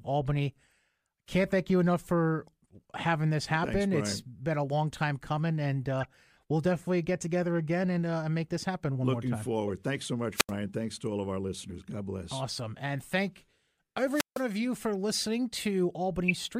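Speech with three short chirping, squeaky bursts at 6.00–6.05 s, 9.67–9.70 s and 16.28–16.32 s, the last and loudest peaking around -15 dBFS; these are corrupt frames decoded, where damaged compressed data was played anyway and spread energy into wrong frequencies. At 10.34–10.52 s and 14.10–14.44 s, hiss swells into near-silent holes of 81 ms and 156 ms before the voice returns, a wireless microphone squelch dropout, where the fading radio signal triggered the receiver's muting.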